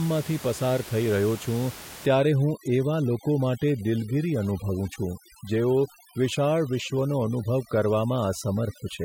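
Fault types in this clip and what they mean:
Overdone noise removal: from 2.06 s to the end, an over-strong noise reducer cuts individual frequency bands near its noise estimate, leaving a lowered background that breaks up into twinkling specks. A noise gate would instead mute everything at once, without the specks.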